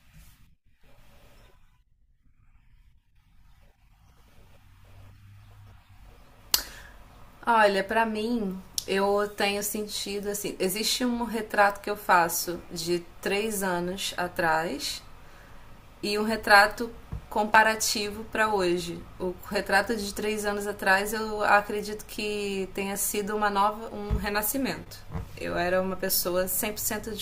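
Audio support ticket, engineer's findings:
No audible defects found in the speech signal; level, continuity and channel behaviour look stable across the whole recording, so no component points to a fault.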